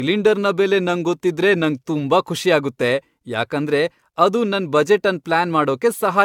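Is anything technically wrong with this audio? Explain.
Yes. Throughout the speech there is generation loss, likely from around five successive AAC-LC passes at a rate consistent with 96 kbit/s. Each re-encode quantises on a shifted frame grid, so noise and spectral holes compound: the sound is swirly, hollow and smeared, consonant attacks blur, and nothing remains above 17 kHz.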